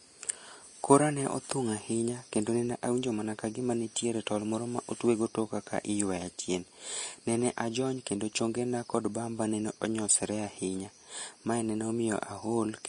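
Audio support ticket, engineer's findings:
Hissy, grainy treble across the whole speech clip; sibilants smeared into noise, consonant attacks blurred, tonal parts roughened. Nothing above 10.6 kHz. Likely cause: Vorbis compression at low quality, with the damage plainly audible and the sound pointing to a low bitrate around 35 kbps. The encoder lowers its cut-off and quantises the upper residue so coarsely that fine detail is replaced by noise of similar energy.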